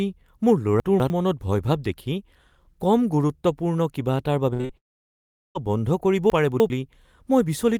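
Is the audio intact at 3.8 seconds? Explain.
Yes, the speech at 3.8 seconds is intact, with no dropout, click, distortion or other fault at that point.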